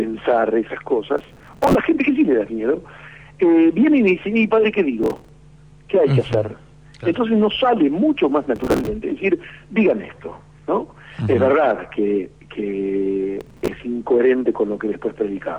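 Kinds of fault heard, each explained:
Processor overload crackle: The processor repeatedly missed its buffer deadlines, so fragments of old audio were replayed with hard edges, giving gritty tearing from 1.18 to 1.75, 5.04 to 5.29, 8.56 to 8.87 and 13.41 to 13.68 s. The fragment spacing fits buffers of around 5 ms. On the spectrogram these bursts show as dense vertical striping, and the waveform shows abrupt discontinuities.
Loud pop: A sharp pop sits on top of the continuing sound at 6.33 s and lasts about 30 ms, peaking about 10 dB above the surrounding signal. It was likely caused by a voltage step from a switch, plug or driver glitch. It appears as one tall spike in the waveform and a single full-band vertical line on the spectrogram.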